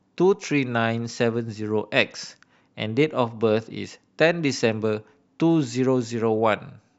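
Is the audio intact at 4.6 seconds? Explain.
Yes, at 4.6 seconds the speech plays through cleanly, with no dropout, click, distortion or other audible fault at that moment.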